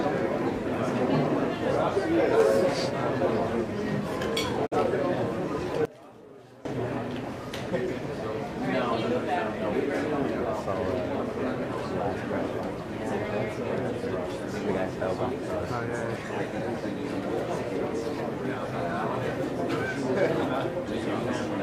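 At 4.65 s the sound fades out over 20 ms and stays silent until 4.76 s. This is a digital broadcast dropout. The receiver muted when a frame went bad. The gap of about 43 ms fits a single lost frame. Whatever was sent then is gone.

From 5.85 to 6.65 s the whole sound, background included, drops by about 21 dB. A much quieter copy remains. The likely cause is one channel inverted. With one side's polarity reversed, the shared content cancels in the mono sum. Only the difference between channels survives.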